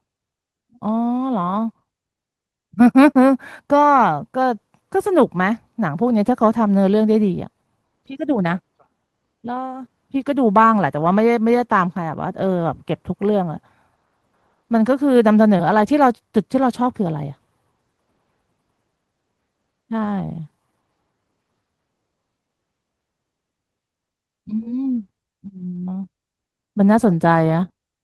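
At 1.69 to 1.71 s and 3.97 to 3.99 s there are two lost packets rebuilt from error correction. Each leaves a 20 ms patch that is grainier and noisier than its surroundings but has no gap. The decoder played a low-bitrate copy of the missing frame carried inside the next packet, so what you hear is the real signal at reduced quality.

At 15.57 to 15.61 s a short concealed packet loss behaves differently. About 20 ms went missing, and roughly 17 ms of it was filled by extending the preceding sound before blending back. The result is a brief smear or wobble rather than coarse graininess. The end of that stretch, 15.59 to 15.61 s, is again a rebuilt packet, so the rough texture follows directly on the smear.

The error-correction rebuilds recur at 20.05 to 20.07 s and 25.75 to 25.77 s, each 20 ms. A longer one runs from 27.03 to 27.09 s, with 40 ms rebuilt, which points to two frames recovered this way.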